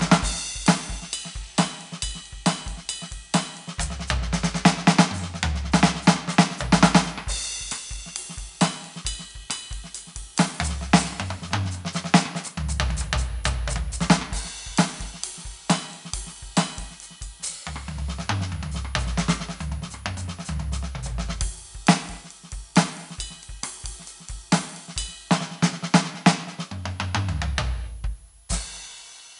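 The whole piece of music carries 4-bit ADPCM compression. Each sample is coded as a coarse step from a prediction, so gritty hiss rides on every loud passage. Attacks sound rough. Nothing reaches above 10.6 kHz, dulling the top, and the density suggests a rate near 89 kbps.

From 6.46 s to the end, a switching supply whistle appears. A power supply is cycling in an audible range. The result is a thin high tone that wanders between 10.4 and 10.6 kHz, sitting roughly 25 dB below the music.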